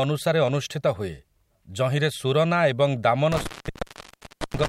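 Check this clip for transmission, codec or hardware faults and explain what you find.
There's one fault here, an intermittent contact. At 3.32 s a loose cable or plug momentarily opens, and the speech drops out for about 1.07 s with crackle at the break, leaving only faint hiss, before the connection closes again shortly before the clip ends.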